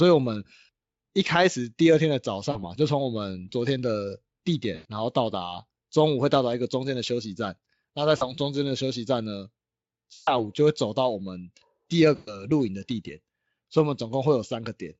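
VoIP packet loss concealed by the speech codec occurs at 2.51–2.59, 4.75–4.89, 8.17–8.31, 10.13–10.32 and 12.15–12.51 s. About 40 to 140 ms of audio goes missing, and the decoder extends the last pitch and spectral shape into a fading buzz or noise that stays weak after audio resumes.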